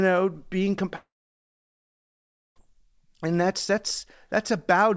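From 0.96 to 2.58 s the speech collapses into a brief fading buzz, then 1.48 s of silence, likely a long network dropout losing 1.6 s of audio.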